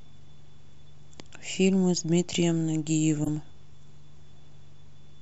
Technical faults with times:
3.23-3.29 corrupt frame decoded

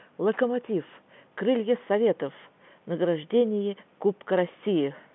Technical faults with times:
none

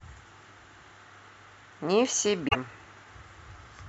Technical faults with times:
2.47-2.55 damaged data in a compressed stream

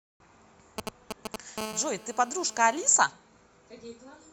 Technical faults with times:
0.78-1.60 GSM signalling bursts
1.60-2.90 GSM phone buzz

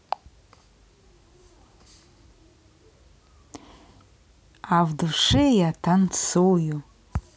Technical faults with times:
none

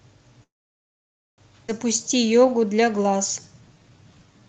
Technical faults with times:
0.43-1.41 call audio freeze
1.68-1.71 skip ahead
2.03-4.48 jitter buffer slow-down

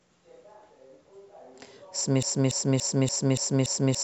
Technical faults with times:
2.23-4.03 broken-record loop

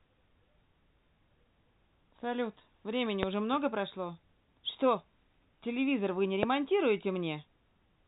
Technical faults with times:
3.23-3.25 loud pop
6.43-6.45 loud pop

